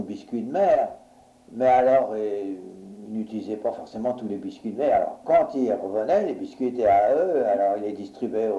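Nothing stood out as a technical fault on listening.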